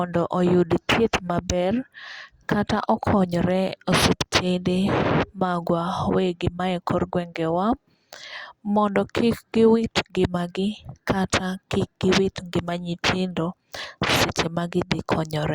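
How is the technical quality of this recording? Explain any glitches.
The technical quality of the recording is good, with no glitches to explain.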